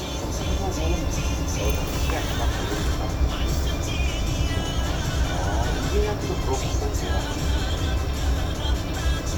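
No technical faults can be heard anywhere in this recording of sounds.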